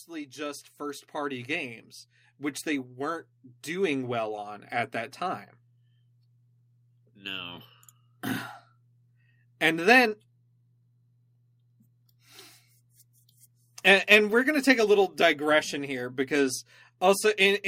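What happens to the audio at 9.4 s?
Nothing goes wrong at 9.4 s; the speech carries on intact through that moment, with no audible fault.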